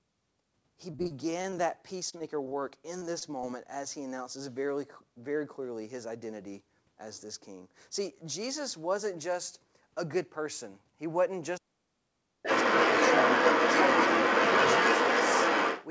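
From 0.92 to 1.54 s the speech turns choppy and robotic. This is repeated packet loss. Seven gaps arrive in quick succession, the longest 34 ms. Each is patched by stretching the last sound, so about a quarter of that span is synthetic filler.

The same repeated packet loss returns from 2.10 to 2.53 s, in milder form. Four gaps, none longer than 20 ms, leave the speech briefly chopped. About a sixth of this stretch is concealed rather than real audio.

At 3.19 to 3.23 s there is a short concealed packet loss. Roughly 20 ms never reached the decoder in time. The receiver extended the preceding sound to cover the hole and then blended back, which gives a small smear or wobble.

From 11.59 to 12.45 s the talker's speech sinks sharply, dropping by around 40 dB at its deepest over most of that span. This is speech suppressed in double talk, likely because the echo canceller heard both sides at once and turned everything down.

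From 12.43 s to 15.87 s another voice can be heard underneath, sitting roughly 10 dB below the main speech. This is the other side's voice leaking through, likely loudspeaker echo that the canceller failed to remove from the microphone.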